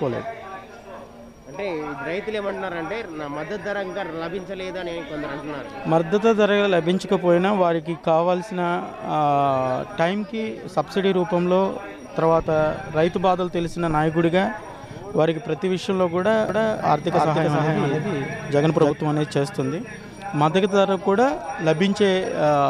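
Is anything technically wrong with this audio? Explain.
Yes. From 16.49 s to 18.91 s there is a doubled audio track. The likely cause is a second, slower capture path, or an edit that left two copies of the same material out of step. That puts a full-band duplicate roughly 300 ms behind the original, at about the same loudness. It sounds like a dry, clean repeat trailing each sound, with no decay or room colour, and it cuts in and out abruptly at both ends.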